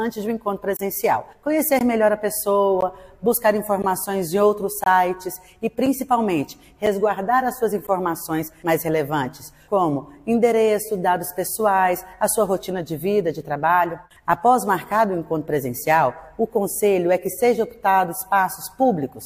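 Gaps between stream segments fall at 0.77–0.79 s, 1.79 s, 2.81 s, 3.82 s, 4.84–4.86 s, 5.86 s, 6.86 s and 7.87 s, once per second, matching 1.0 s segments. Each segment's time stamp starts slightly after the previous one ends, so the player fills the hole with silence. Each gap is a hard-edged dropout of about 4 to 24 ms. No audio is lost, but the sound jerks at every boundary.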